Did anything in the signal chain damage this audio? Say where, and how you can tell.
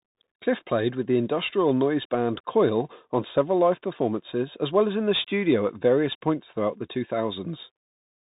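Yes, at the codec stage: Bluetooth CVSD headset coding throughout. Nothing passes above 3.8 kHz, s sounds turn scratchy, and granular hiss comes from one-bit adaptive delta steps.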